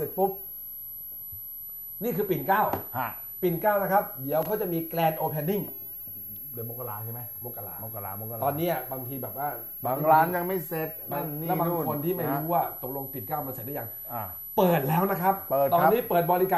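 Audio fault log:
Throughout: switching supply whistle. A thin, high whistle sits under the whole clip, wandering between about 11.6 and 11.8 kHz, at roughly 15 dB below the main sound. A switching power supply dropping into an audible burst mode, or beating against a second supply, puts its switching energy into the audible band. On a spectrogram it shows as a narrow horizontal line near 11.7 kHz that wobbles slightly as the load shifts.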